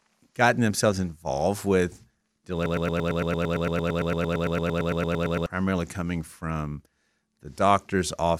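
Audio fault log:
2.66–5.46 s, broken-record loop: a 113 ms fragment of the speech plays 25 times back to back, producing a mechanical stutter that repeats about nine times per second. The speech that should have filled those 2.8 seconds is lost. The likely cause is a stalled player, encoder or stream that kept re-sending the last piece it held. On a spectrogram, one short pattern tiles identically across the span, and the waveform shows the same block copied end to end.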